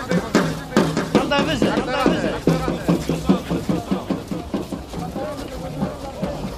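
From the start to the end of the clip, a doubled audio track runs under the main sound. A second full-band copy trails it by roughly 0.7 s and sits about 5 dB lower. It is most likely a second capture through a slower route, or two copies left out of step in an edit. Unlike an echo or room reverb, the copy stays clean and uncoloured, arriving once with no decaying tail and no repeats.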